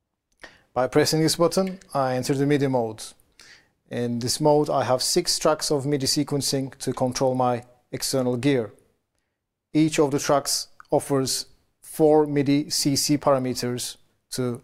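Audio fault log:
No technical faults detected.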